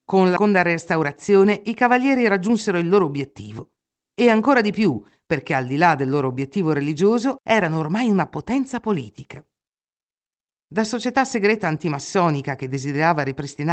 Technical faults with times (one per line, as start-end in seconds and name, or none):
0.36 skip ahead
0.44-1.92 jitter buffer speed-up